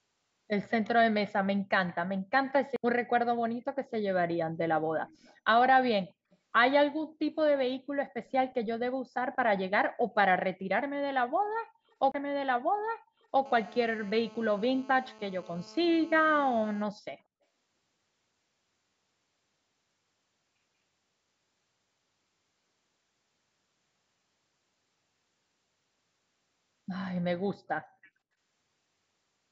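At 2.76 s a CD skip cuts in: the pickup jumps to another turn of the disc's spiral, the output mutes for a couple of milliseconds, and playback resumes elsewhere, heard as a tick and a jump. A second skip at 12.12 to 12.14 s mutes for about 30 ms.

From 5.08 to 5.35 s, 6.31 to 6.37 s and 8.25 to 8.32 s, a faint copy of the speech trails it by 187 ms, about 35 to 40 dB down. This is likely echo leak from a loudspeaker on the far end of the call.

Between 13.46 and 16.83 s a GSM phone buzz sits about 24 dB below the speech: a hard, raspy 217 Hz tone rich in harmonics. A nearby 2G handset in a call transmits in bursts, and the audio circuitry rectifies those radio pulses.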